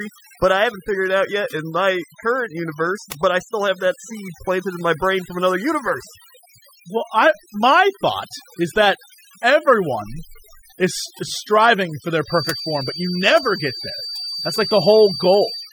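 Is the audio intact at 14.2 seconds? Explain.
No. Overdone noise removal, present throughout, is cutting frequency bands near the noise floor, leaving twinkling specks in near-silence. From 12.22 s to the end, a near-feedback loop between loudspeaker and microphone is the likely cause of a feedback whistle, a steady 4.6 kHz tone swelling and fading slowly, roughly 10 dB below the speech.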